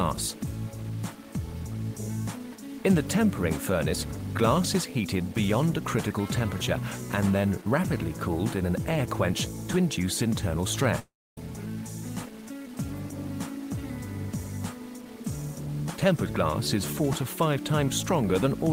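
Throughout the clip, low bit depth without dither gives the sound a grainy, gritty distortion that tracks the level, with quiet passages sputtering between coarse steps. The likely cause is truncation to about 7 bits, leaving an error floor only about 25 dB below the signal.

From 10.99 s to 11.38 s, a long network dropout interrupts the audio. The last sound continues briefly as a fading buzz or hiss, then about 0.28 s of silence follows. Playback resumes at 11.38 s with roughly 0.38 s of material missing, likely lost packets concealed by the receiver.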